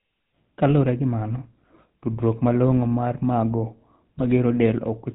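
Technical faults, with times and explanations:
Throughout, GSM full-rate codec: The voice is squeezed into a coarse vocal-tract model driven by a regular pulse train, with the excitation thinned to every third sample. The character fits a 13 kbps full-rate GSM coder. Nothing survives above 4 kHz, so the voice sounds dull and boxed in. The sparse pulse excitation adds a plainly audible buzzy, gravelly roughness that runs under every voiced stretch.
4.18 to 4.27 s, GSM bit errors: Corrupted bits reach the speech decoder, so it rebuilds short stretches from wrong filter, pitch and gain values. Over these 90 ms the spectrum suddenly warps and the level jumps, and the voice breaks into a brief gargling squawk. The damage fits roughly four consecutive 20 ms frames being hit.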